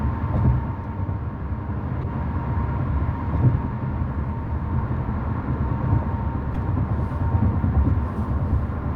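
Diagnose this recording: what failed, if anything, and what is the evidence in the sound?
Codec stage: a corrupt frame was decoded at 2.02–2.06, 4.46 and 6.55–6.57 s. Flipped bits misplace energy, giving brief chirps, squeaks, blips or bursts of noise that show as short, stray streaks on a spectrogram.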